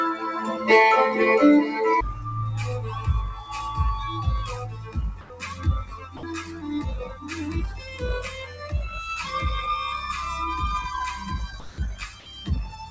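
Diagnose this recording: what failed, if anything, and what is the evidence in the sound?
The failure sits in call processing. A speech noise suppressor stayed active on non-speech audio. It treats steady tones and decaying tails as noise. The level swings by roughly 10 dB across the clip. Held material sinks while attacks pass through. The result is a pumping, thinned texture. The band stops near 8 kHz throughout. That fits a wideband call codec such as G.722 at 64 kbps.

The sound cut by the noise suppressor is audible at four spans. From 4.74 to 6.63 s the level drops by about 11 dB at worst. From 7.07 to 7.27 s it drops by about 9 dB. From 7.75 to 8.73 s it drops by about 8 dB. From 11.19 s to the end it drops by about 9 dB. In each span, sustained parts and decays fade early. Sharp onsets stay mostly intact.

Comfort noise in place of the background appears twice. From 5.21 to 5.30 s, a 90 ms patch of smoother synthetic noise replaces the real ambience. 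It is about 2 dB louder than the ambience. From 11.60 to 11.78 s, a 180 ms patch sits about 1 dB quieter. The background runs about 23 dB below the loud passages at the first patch and about 20 dB at the second. Discontinuous transmission is the likely cause. The receiver synthesised noise while the sender paused.

The sound was dropped by the voice detector from 6.17 to 6.23 s. For 60 ms the audio vanishes. Steady synthetic noise fills the gap. The likely mechanism is the sender's voice detector. It judged this sound to be background and stopped sending. The receiver then inserted comfort noise until transmission restarted.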